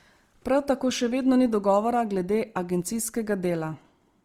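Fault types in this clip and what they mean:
Opus compression: the speech sounds rough and grainy, with a noisy texture on tones, though content still reaches 20.2 kHz. This likely comes from Opus in its CELT music mode, filling starved bands with folded or noise energy, which fits a rate near 24 kbps.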